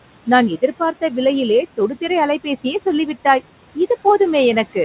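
Throughout the clip, a noise suppressor is pulling down the bands it judges to be steady background by about 18 dB, frame by frame. These noise suppressor artifacts leave the room noise pumping, dropping in the gaps and swelling under the speech. The speech itself is band-limited to 4 kHz, as expected from a narrowband call path.

Between 0.57 and 1.13 s, and again from 1.77 to 2.1 s, the suppressor mistakes parts of the speech for noise. The first cut goes about 18 dB deep and the second about 12 dB, each lasting only a fraction of a second. These stretches of speech cut by the noise suppressor leave the affected speech sounding swallowed and faint.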